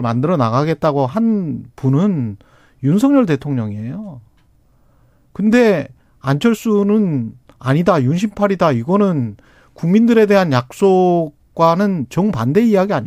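A speech recording with no technical faults to report. Nothing in it needs a time mark or an explanation of cause.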